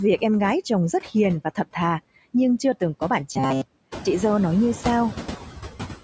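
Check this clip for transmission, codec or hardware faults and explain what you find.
Two faults stand out in this speech clip.

Throughout, noise suppressor artifacts: the background noise sinks between phrases and swells back under the speech, because the suppressor pulls steady-noise bands down by about 10 dB frame by frame.

From 3.33 to 4.05 s, between "chưa từng có bạn" and "dâu nói như", the voice becomes a rigid metallic buzz at 133 Hz: robotic sound from repeated short buffers. The likely cause is late audio being covered by looping a buffer of about 7.5 ms over most of that stretch.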